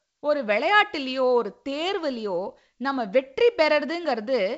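No technical faults can be heard anywhere in the speech. It comes through a G.722 wideband telephone path at 56 kbit/s, with content reaching up to about 7.7 kHz and nothing above, and only a light trace of coding noise.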